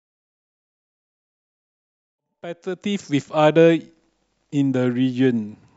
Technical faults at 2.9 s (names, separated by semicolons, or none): none